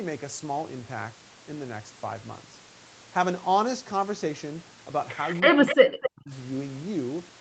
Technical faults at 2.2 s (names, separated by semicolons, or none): none